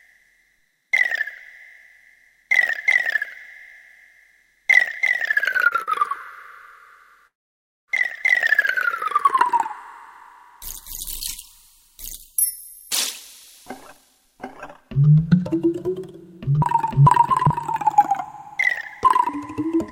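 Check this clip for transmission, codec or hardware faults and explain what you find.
Three kinds of network transmission fault are audible.

Short stalls from a late packet occur at 5.68 to 5.74 s and 5.83 to 5.90 s. Each packet arrived late, so the receiver held the last sound for 28 ms, then 42 ms. This causes brief stretches with a faint buzz or dip, and nothing is lost.

A call audio freeze runs from 7.27 to 7.91 s. The sound stops and is replaced by about 0.6 s of near-silence. Then it resumes where it left off. The likely cause is delayed packets draining the jitter buffer.

A jitter buffer speed-up runs from 13.66 to 19.74 s. To cut the extra delay, the receiver trimmed small pitch-period pieces, about half a second in total. The sound plays at 108% speed at the same pitch and sounds hurried.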